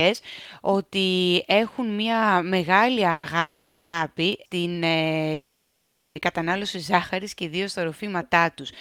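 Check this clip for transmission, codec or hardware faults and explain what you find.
Two kinds of fault are here: a run of call audio freezes and one bit error spike.

Call audio freezes at 3.11–3.25 s, 3.39–3.95 s and 5.33–6.17 s: the speech stalls and the last sound smears into a fading buzz. In the longest freeze it drops to silence for about 730 ms. It likely comes from packets arriving late and the jitter buffer running dry. Nothing is lost; the speech picks up where it stopped, so the delay grows by 120, 540, then 820 ms.

Bit error spike at 4.33 s: a single sharp tick, unrelated to the speech, from a flipped bit corrupting two adjacent samples.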